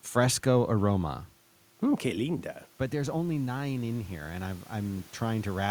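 At about 2.0 s the talker moves away and the level drops by about 11 dB. Then, from 2.02 to 5.66 s, automatic gain rising lifts it back by about 5 dB. Unlike the talker's move, the room noise swells along with the voice as the gain climbs.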